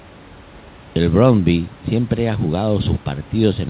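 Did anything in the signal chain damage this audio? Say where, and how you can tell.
No, the signal chain left this speech intact: the call path band-limits it to nothing above 4 kHz, consistent with a 64 kbps G.711 mu-law call, and the room noise sits about 28 dB below the speech.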